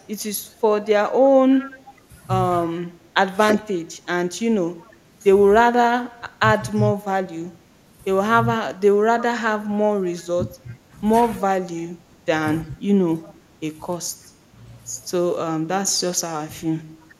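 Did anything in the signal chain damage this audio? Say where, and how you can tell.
Yes. At the call-processing stage there is echo leak: a delayed copy of the sound, 343 ms behind, at 0.21–1.88 s and 9.2–10.73 s, about 20 dB down, with fainter scraps at 4.83–4.92, 6.75–6.89 and 13.21–13.34 s. The likely cause is a far-end echo canceller letting loudspeaker pickup through.

The same call processing shows speech suppressed in double talk. Within 0.49–8.5 s and 10.36–14.3 s the level dips in pieces by about 10 dB, totalling roughly a second and half a second respectively, plus a brief dip of about 5 dB at 17.08–17.14 s, likely the canceller ducking overlapping talk.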